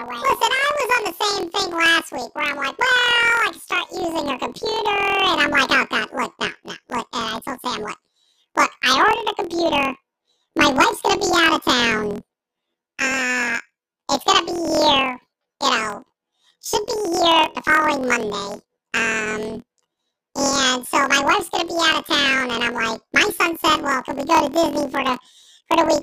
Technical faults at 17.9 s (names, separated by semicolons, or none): planar audio read as interleaved